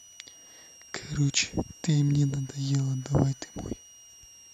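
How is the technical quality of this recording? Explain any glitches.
The recording is marred by a switching supply whistle running through the whole clip. A switching power supply somewhere in the chain is cycling at an audible rate, slipping into a burst mode or beating against a second supply, and its ripple is leaking into the audio path. The result is a thin, high whistle near 3 kHz that wanders between about 2.81 and 2.94 kHz as the load shifts. It sits roughly 25 dB below the speech.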